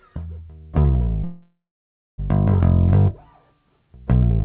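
From 1.24 to 2.2 s, a call audio freeze: the last sound decays into 0.6 s of silence, likely from late packets, then resumes intact.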